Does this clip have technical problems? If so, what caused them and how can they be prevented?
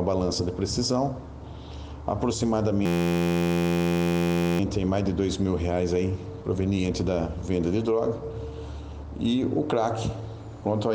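Yes. From 2.86 to 4.60 s a system hang loop turns the sound into a steady buzz at about 86 Hz. An 11.6 ms slice, which fits a 512-sample buffer, repeats exactly about 150 times while the hardware recycles its ring buffer during the freeze. Random dropouts or crackle would not repeat like this; here every cycle is identical, so the buzz holds one pitch. Keeping audio drivers up to date and giving the audio thread priority helps prevent such freezes.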